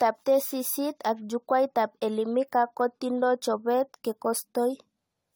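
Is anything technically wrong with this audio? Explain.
Yes. Throughout the speech, from start to finish, there is generation loss. The sound is swirly and hollow, with smeared consonant attacks. The likely cause is the audio passing through a lossy AAC-LC encoder around five times, at a quality that points to roughly 64 kbit/s. Each re-encode quantises on a shifted frame grid, so the errors compound. On a spectrogram this appears as flickering holes and blotchy patches across the upper bands, with content extending to 20 kHz. The waveform shows softened, pre-smeared transients.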